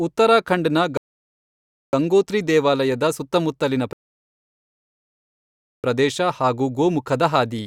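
Twice the player ran out of downloaded audio, a rebuffering stall: silence from 0.97 to 1.93 s and 3.93 to 5.84 s, then speech resumes without loss.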